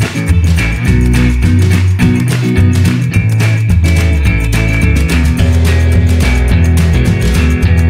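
From the start until about 2.49 s, a thin, steady chirping warble sits well beneath the sound, roughly 30 dB down, flickering between two pitches near 1 kHz and 2 kHz before stopping. This is timecode bleed: linear timecode, a square-wave signal that encodes each frame by switching between those two frequencies, has leaked in from an adjacent track or cable. Its rhythm fits code running at 24 frames per second.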